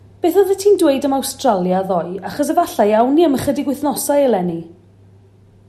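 Hard clipping flattens speech peaks at 0.39 s and 1.49 s, then across 2.59 to 3.01 s, each overdriven by about 1 dB, so the squared tops add brief crackle.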